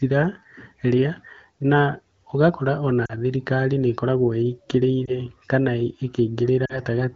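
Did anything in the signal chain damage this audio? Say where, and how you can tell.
Yes. Brief dips at 3.05–3.13, 5.06–5.11 and 6.66–6.80 s are lost AMR speech frames from the radio link: the decoder stretched the last good frame with fading gain over 20–40 ms gaps.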